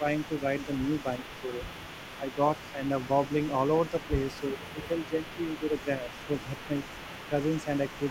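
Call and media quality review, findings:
Speech suppressed in double talk: level dips of about 10 dB (about 5 dB at 3.91–4.09 s) at 0–0.69, 1.02–1.69, 2.18–2.38, 2.72–3.09, 3.91–4.09, 4.4–6.7 s, the last dipping for over a second. Likely echo canceller attenuating the near-end talker during overlap.

Echo leak: faint delayed copy of the speech, about 20 dB below it, trailing by 357 ms across the whole clip, 0–8.1 s. Likely residual loudspeaker echo passing the far-end echo canceller and being sent back.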